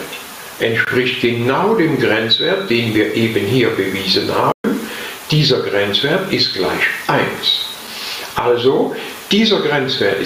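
The audio shows gain pumping throughout. The gain swings by around 15 dB. Loud and quiet parts sit close together and sound squashed. The likely cause is input gain set far too high, with a fast limiter or compressor pulling it down. A playback stall cuts the sound from 4.52 to 4.64 s. The output goes silent for about 120 ms mid-flow, then resumes. The player likely ran out of data or its thread was briefly blocked.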